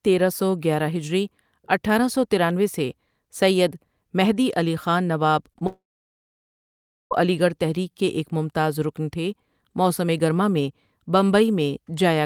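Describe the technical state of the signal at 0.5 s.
At 0.5 s the signal is intact, with no audible fault at that point.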